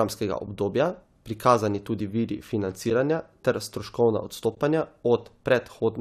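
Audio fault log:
0.47 s, 2.90 s and 4.55–4.57 s: AAC frame loss with muting. The decoder zeroed lost frames, so overlapping windows fade the speech out and in, leaving soft gaps of 10, 10 and 20 ms.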